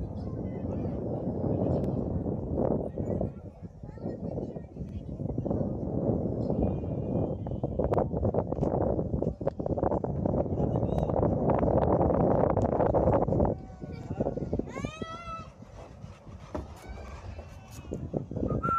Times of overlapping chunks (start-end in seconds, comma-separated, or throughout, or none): 1.84-1.89, 4.89-4.94, 7.94-7.99, 10.99-11.03, 14.03-14.08, 17.08-17.13